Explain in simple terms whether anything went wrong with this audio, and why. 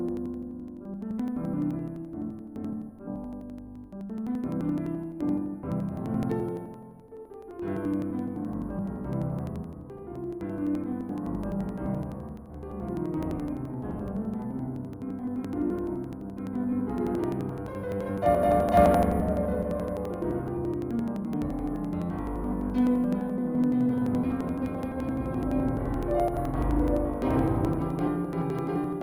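Interleaved audio read as planar runs through the whole music clip. Left and right samples stored alternately were split into halves, each played at half speed, so everything sounds an octave low, doubled and choppy, pulsing about 11.7 times a second, which fits 4096-sample blocks.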